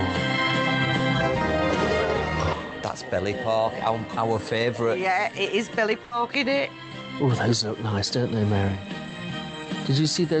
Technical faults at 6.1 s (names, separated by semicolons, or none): burst of packet loss